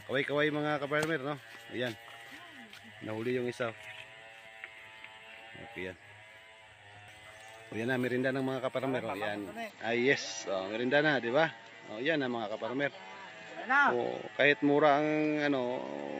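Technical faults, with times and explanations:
9.70 to 16.20 s, input switched to a poorer device: the sound abruptly turns dull, with nothing above 7.6 kHz, a level shift of around 5 dB and new background noise well beneath it, with no gap, likely from recording moving to a narrower-band microphone.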